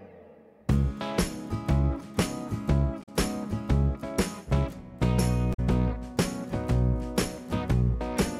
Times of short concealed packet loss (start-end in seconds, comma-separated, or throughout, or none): none